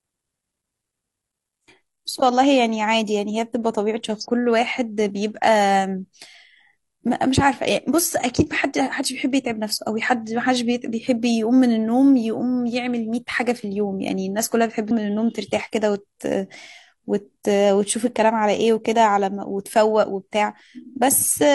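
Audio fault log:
4.20–4.25 s and 14.87–14.91 s: damaged data in a compressed stream. Each is a brief 44 ms fault as the decoder misreads corrupted frames and hunts for the next valid header. The decoder losing sync on corrupted frames, rather than the signal simply stopping, separates it from a plain dropout.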